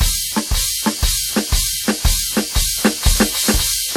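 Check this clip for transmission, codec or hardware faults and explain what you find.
One codec fault runs through the whole music clip. Throughout, the sound rings and smears with a hiss that breathes with the music and nothing above 19.8 kHz, most likely WMA compression at a low bitrate, consistent with about 48 kbps. Long transform blocks spread quantisation noise over tens of milliseconds and zero weak components. Unlike a plain low-pass filter, the damage is a pumping wash, not simple dullness.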